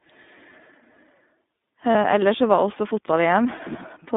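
The speech has a thin, telephone-like sound throughout, cut to roughly 200 Hz to 3.7 kHz, with a plainly audible rough, slightly synthetic edge. This is the iLBC codec. It codes each 30 ms frame on its own, squeezing the voice into a narrowband line and rebuilding it from a simplified excitation, which fits its 13.33 kbps mode. The missing highs and the grainy texture both come from that coding.

At 1.92 s the voice briefly turns into a short, held, slightly buzzy vowel for about 30 ms. At 3.56 s it does the same for a little longer, around 50 ms. These are lost iLBC frames, each fitting a single missing 30 ms frame. The decoder filled each gap by repeating the last pitch cycle blended with noise. Because iLBC frames stand alone, the voice snaps back cleanly right after each gap.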